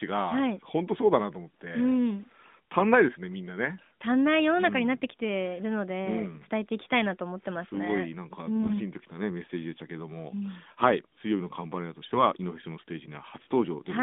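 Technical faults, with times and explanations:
8.56–8.77 s, AMR bit errors: the voice briefly turns hoarse and gargly but keeps its pitch, because flipped low-priority bits misplaced the codec's excitation pulses and gains.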